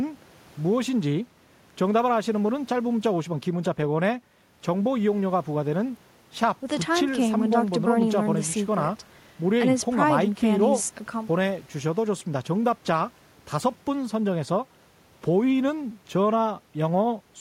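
No technical faults are audible anywhere in the recording.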